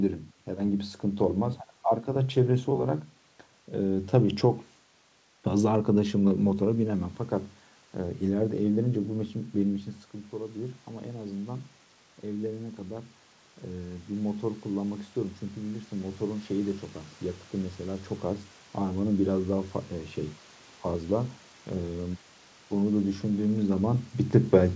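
In this speech recording, voice and room noise swell together from 10.3 to 13.18 s and again from 13.72 to 16.54 s, each by about 4 dB: automatic gain rising, after the talker moved away near 9.5 s and the input fell about 12 dB.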